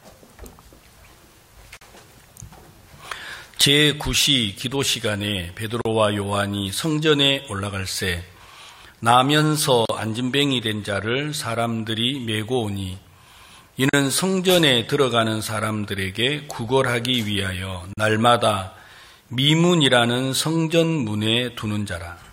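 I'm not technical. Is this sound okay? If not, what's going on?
No, not quite. There's a repeating hiccup: a short dropout of about 40 milliseconds at 1.77, 5.81, 9.85, 13.89 and 17.93 seconds, so once every 4 seconds. That's a gap at a join of encoded pieces. The audio was saved in separate chunks and stuck back together, and each chunk kept a sliver of silence at its edge. You hear a tiny blip of nothing, then the sound picks up right where it left off.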